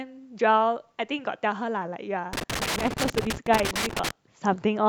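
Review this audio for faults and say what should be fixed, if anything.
An irregular burst of crackle and scratching breaks into the speech from 2.33 to 4.11 s. This is loose connector crackle: a worn or dirty contact keeps making and breaking as it shifts, chopping the signal, while any DC on the line adds pops. Clean or replace the connector and secure the cable so it cannot move.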